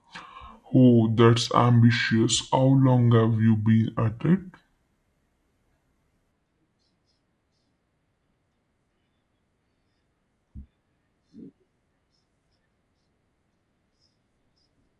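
The speech runs slow and deep from start to finish, the mark of a wrong sample rate: material recorded at 48 kHz is being played back at 32 kHz with no conversion, so everything moves at two-thirds speed and drops about 7 semitones. On a spectrogram the harmonics and formants sit compressed toward the bottom by that same two-thirds factor, while the waveform shows syllables and pauses stretched out in time.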